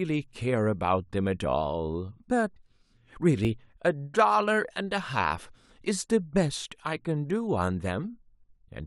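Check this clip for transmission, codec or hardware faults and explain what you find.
One transmission fault is audible in this speech clip: an overlap between stream segments at 3.45 s. About 16 ms of audio is discarded where two segment timestamps collide, so the waveform jumps abruptly, producing a brief click or tiny skip at that boundary, consistent with 6-second segments.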